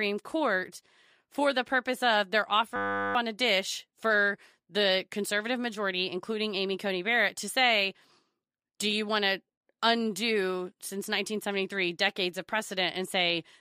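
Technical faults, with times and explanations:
2.76–3.15 s, system hang loop: the driver or computer froze while the sound hardware kept replaying one 10 ms buffer 39 times. Between "the purpose of they're" and "on a dish for", this becomes a steady 100 Hz buzz, replacing about 0.4 s of speech.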